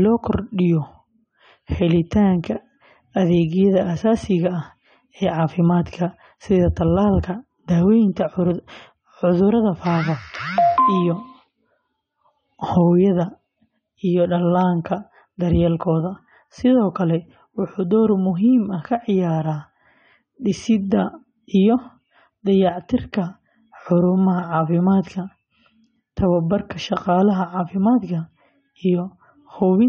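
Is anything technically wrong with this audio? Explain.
Yes. For the whole clip the speech sounds dull and smeared, with nothing above 9 kHz, and sibilants and sustained sounds carry a warbling, fizzy texture. The likely cause is AAC compression at a low bitrate, which fits roughly 32 kbps AAC-LC. With so few bits, the encoder lowers its cut-off and coarsely quantises each frame's spectrum against a hearing model. That leaves gaps or substitute noise in the bands it cannot afford, and the result is plainly audible.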